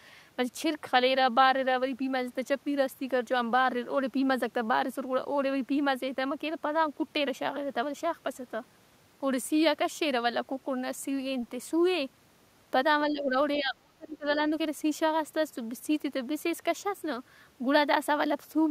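At 13.11 s the speech dips by roughly 10 dB until 13.36 s, then at 13.56 s it drops much harder, by around 35 dB, nearly vanishing until 14.38 s. This is speech suppressed in double talk, likely from an echo canceller that heard both ends active at once, could not tell this talker from loudspeaker echo, and attenuated everything it picked up.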